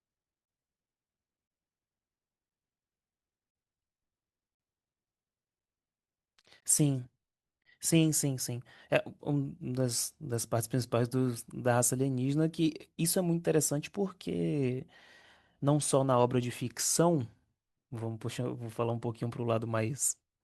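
Gaps between stream segments occur at 0.45, 1.48, 3.51, 4.55, 6.60 and 7.62 s, lasting 20 to 47 ms each. Consecutive 1-second segments are timestamped slightly apart, so the player inserts silence, heard as abrupt hard-edged dropouts in the speech with nothing missing.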